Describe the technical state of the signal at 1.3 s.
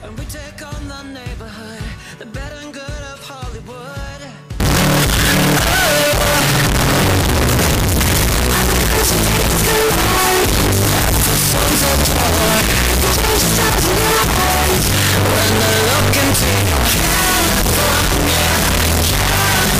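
At 1.3 s the signal is intact, with no audible technical fault at that moment.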